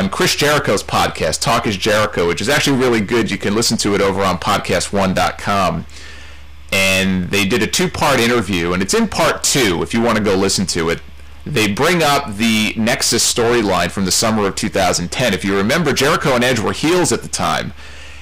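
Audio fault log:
throughout: hard clipping. Overdriven by about 25 dB, the signal has roughly a fifth of its samples flattened at the clipping point, so every loud sound is a harsh fuzz. The waveform shows squared-off plateaus, and the spectrogram shows harmonics smeared far upward.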